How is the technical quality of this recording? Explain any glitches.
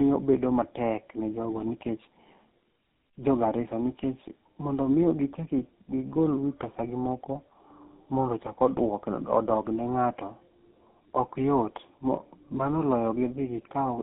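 The quality is poor throughout because of tandem speech coding. The speech passed through two speech codecs in a row, consistent with AMR-NB then GSM full rate, the second re-encoding the first's losses. It sounds rough, muffled and warbly. A spectrogram shows nothing above 3.8 kHz and smeared harmonics.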